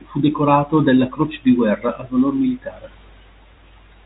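No technical faults are audible.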